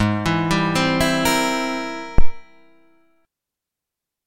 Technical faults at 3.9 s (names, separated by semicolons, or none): none